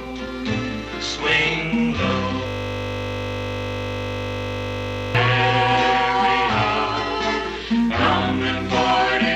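The computer froze from 2.47 to 5.15 s while the sound hardware replayed one 20 ms slice: a system hang loop, heard as a steady 50 Hz buzz.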